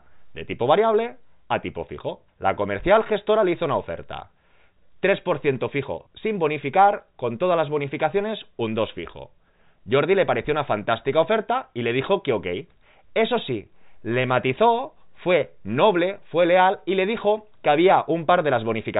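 No technical faults are audible.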